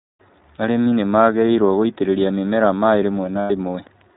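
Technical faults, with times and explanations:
Throughout: iLBC codec. The speech is band-limited, with nothing above 4 kHz, so it sounds narrow and telephone-like. The damage is plainly audible. Vowels carry a slight roughness and a synthetic edge, because the codec rebuilds each frame's excitation on its own, without help from the frame before. The character fits the 15.2 kbps mode with 20 ms frames. Fine detail in sibilants and breath is lost.
0.56–0.58 s and 3.40–3.51 s: lost iLBC frames. Packets went missing and the decoder filled each gap by repeating the last pitch cycle, mixed with noise. The first gap is about 20 ms long, which fits one lost frame. It passes as a tiny held blip. The second lasts about 100 ms, which fits five lost frames. It sounds like a stretched, buzzy, slightly breathy vowel that fades as the loss goes on. The speech snaps back cleanly right after each gap, since every iLBC frame decodes independently.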